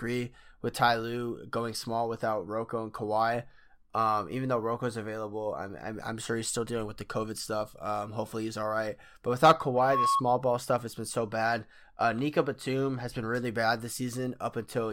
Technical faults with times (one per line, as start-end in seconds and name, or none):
9.74-10.23 loudspeaker feedback squeal